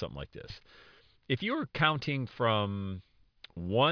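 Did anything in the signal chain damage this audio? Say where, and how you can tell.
Yes. Aliasing at a sample-rate conversion stage runs through the whole clip. The sound fits a drop from 44.1 kHz to 11 kHz with no anti-alias filter, so sibilant energy above 5.5 kHz folds back as gritty, metallic tones roughly 25 dB below the speech.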